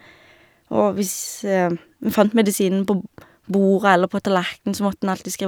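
No technical faults occur at any point in the recording, so there are none to describe in time order.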